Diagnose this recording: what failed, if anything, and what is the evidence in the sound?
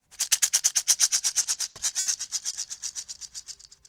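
Repeated packet loss (robotic sound) runs from 1.42 to 2.07 s. This is a network-stage failure that the receiving decoder tried to hide. Over that stretch the audio turns choppy and robotic, with eight separate holes totalling 210 ms, the longest 70 ms, so about a third of the span is synthesised rather than received. Each gap is patched by extending the preceding sound, and the next loss arrives before the audio has properly recovered. That produces the mechanical, broken texture.

Short concealed packet loss occurs at 2.51 to 2.54 s, again at the network stage. About 20 ms of audio failed to reach the decoder in time, and the receiver bridged it by continuing the last sound before blending back into the real signal. What reaches the ear is a brief smear or wobble rather than a clean dropout. It is an isolated loss, separate from the earlier burst of losses.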